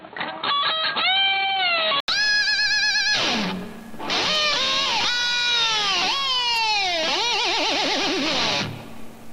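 From 0.0 to 2.08 s the sound is dull and boxy, with nothing above 4.3 kHz and a faint noise floor, likely an input switched to a poorer device. An 80 ms silence follows, then full bandwidth returns at unchanged level: a spectrogram ceiling ending in a gap.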